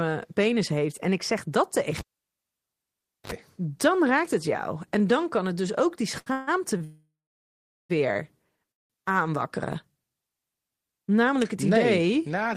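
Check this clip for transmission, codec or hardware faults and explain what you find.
Several faults are audible in this speech clip: a cable disconnection, two short stalls, three freezes and a jitter buffer slow-down.

Between 1.98 and 3.32 s there is a pop, then near silence for about 1.29 s, broken by a 52 ms burst of 50 Hz mains buzz, and a second pop as sound returns. This is a cable pulled and plugged in. The live connection broke, the buzz came while only the tip touched, and contact was restored.

At 6.19 to 6.28 s and again at 6.77 to 6.82 s, a sound is held too long, by 67 ms and then 29 ms, with a buzz or dip. These are short stalls from a late packet. The jitter buffer ran dry, so the receiver stretched the last sound until the packet came. Nothing is lost.

Three times the audio stops and holds. At 6.32 to 6.49 s the last sound carries on as a fading buzz or hiss for 151 ms. 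From 6.84 to 7.91 s this lasts 1054 ms, including 780 ms of silence. From 8.71 to 8.92 s it lasts 181 ms, almost all of it silent. Afterwards the audio resumes from the same point. This is a call audio freeze, likely caused by packets held up in transit that emptied the jitter buffer. The receiver filled the wait, which inserted a gap without removing audio.

From 8.92 to 9.24 s, the speech runs at 89% speed at unchanged pitch, with drawn-out sounds, adding 43 ms. This is a jitter buffer slow-down. The receiver repeated single pitch periods or bits of pauses to rebuild its reserve.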